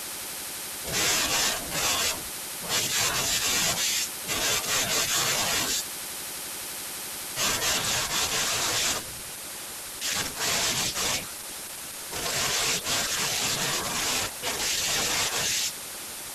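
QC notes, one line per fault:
7.73 s to the end (16.35 s): adaptive stream at a lower bitrate. The speech suddenly changes in quality, with codec artefacts rising, but there's no dropout or gap at the switch. That's the player jumping down to a cheaper version of the stream when the connection slowed, and the sound fits a step from roughly 64 down to 16 kbit/s Opus.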